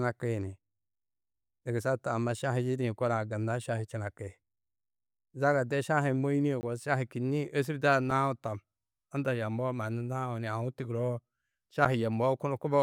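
Speech with three blocks of digital silence: a 20 ms hole from 6.61 to 6.63 s, a 4 ms dropout at 8.11 s just after "kînniĩ ôsurdaa", and a 7 ms gap at 11.85 s. Each cuts to zeros with no fade, giving clicks or ticks, which points to output buffers not being filled in time.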